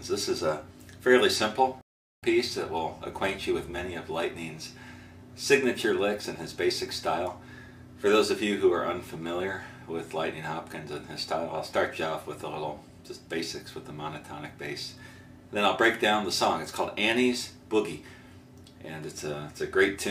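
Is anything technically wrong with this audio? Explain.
Yes. At 1.81 s there is a rebuffering stall: the player exhausted its downloaded audio and paused until more arrived. The sound drops to silence until 2.23 s, then picks up exactly where it stopped, so nothing is missing but about 0.41 s is inserted.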